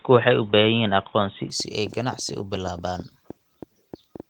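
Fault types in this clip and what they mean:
Input switched to a poorer device: From the start until 1.5 s the sound is dull and boxy. Nothing is heard above 3.8 kHz. At 1.5 s it opens up with no gap at the switch. The level also shifts by about 5 dB. The boxy stretch carries a faint noise floor about 35 dB under the signal. This likely comes from the input moving off a narrowband microphone or headset call profile onto the full-range device.
Train of clicks: From 1.60 s to 4.21 s, sharp ticks sit on top of the sound. They arrive at about six per second, and the spacing is uneven. There are around fifteen in total, all of a similar shape. Their peaks stand roughly 5 dB above the signal, so they stay audible in pauses as well. The likely source is electrical interference from nearby equipment or a faulty connection or power supply.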